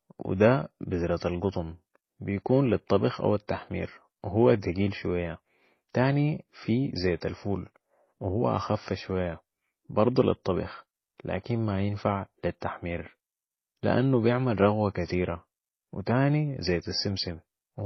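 Throughout the speech, the likely cause is transcoding between lossy codecs: a low-rate MP3-style encode passed again through HE-AAC, both sounding near 24 kbit/s. Nothing survives above 5.9 kHz, and MP3 smearing and warble sit beneath HE-AAC's synthetic, swishy highs.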